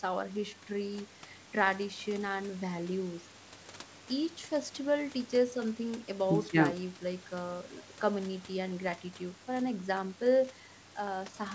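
No audible technical faults here.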